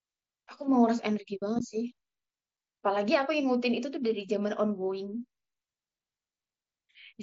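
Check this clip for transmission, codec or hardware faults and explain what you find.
The check finds no faults in this speech clip.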